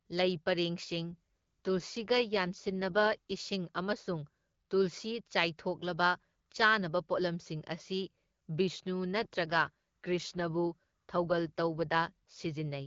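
From 1.05 to 3.44 s, the speech turns rougher and more synthetic. This is an AMR rate drop. The band does not narrow, and there is no gap. The codec simply has fewer bits for the voice, which fits a step from 12.65 down to 8.85 kbit/s. At that rate the wideband speech model gets coarse and raspy. The texture recovers at 3.44 s. The same roughening returns from 9.14 to 12.46 s.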